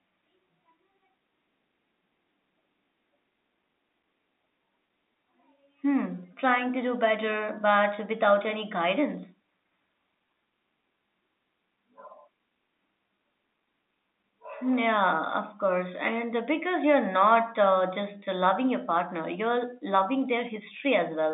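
No faults are present in this speech recording, which carries the narrow band of G.711 telephone coding, running from about 250 Hz to 3.7 kHz with nothing above roughly 3.8 kHz.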